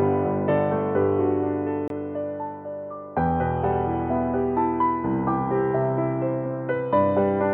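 At 1.88 to 1.90 s the music cuts to silence for about 23 ms, likely a Bluetooth dropout of a single packet; unlike a stall, playback resumes further along.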